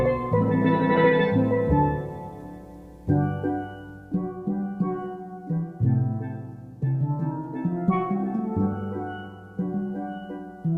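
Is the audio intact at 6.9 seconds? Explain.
Yes, at 6.9 seconds the audio plays through intact, with no dropout, click, distortion or other fault at that point.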